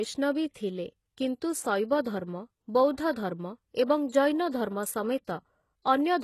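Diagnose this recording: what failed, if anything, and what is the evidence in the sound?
The failure is at the codec stage. The speech has plainly audible coding damage from start to finish. Nothing reaches above 12.3 kHz. The treble that remains sounds rebuilt rather than captured, with s sounds turning gritty and metallic. That points to HE-AAC compression as the likely cause, at a very low bitrate, which fits something near 16 kbps. The upper band is copied up from lower harmonics, so it never quite lines up with them.

Pre-echo is also audible, from the same codec stage. A short hiss arrives just ahead of three sharp onsets: 0.53 to 0.55 s, spreading about 26 ms; 3.12 to 3.16 s, about 38 ms; and 4.09 to 4.12 s, about 33 ms. Each attack sounds softened. The transform block spreads its quantisation noise evenly. So noise sized for the loud onset leaks into the quiet moment before it.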